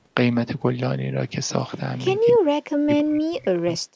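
At 2.31 to 2.52 s, and again from 2.73 s to the end, the speech gets pushed right down, by something like 40 dB at its deepest, and drops out in chunks. That's most likely speech suppressed in double talk, with the echo canceller clamping down on the talker while the far side was also talking.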